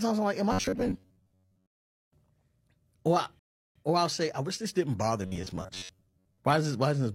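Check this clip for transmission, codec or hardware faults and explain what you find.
Two kinds of fault are present in this speech: robotic sound from repeated short buffers in two stretches, and one rebuffering stall.

From 0.52 to 1.80 s and again from 5.23 to 6.38 s there is robotic sound from repeated short buffers. A rigid 93.8 Hz buzz is imposed on the speech. The likely cause is late-arriving audio being covered by looping a segment of about 10.7 ms, which matches that buzz rate. Roughly 70 percent of the first stretch and about half of the second is repeated material, so the underlying audio there is skipped.

At 3.39 to 3.76 s a rebuffering stall cuts the sound to silence. The player had exhausted its downloaded audio and paused until more arrived, then resumed exactly where it stopped. Nothing is lost, but 362.8 ms is added to the timeline.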